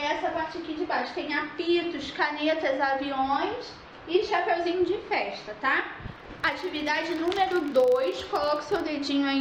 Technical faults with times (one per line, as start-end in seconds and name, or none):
6.08-8.87 filter restarted on every block